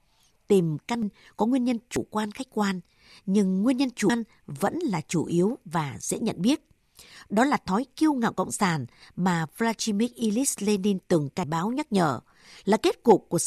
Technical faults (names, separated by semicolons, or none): dropped buffer (overrun)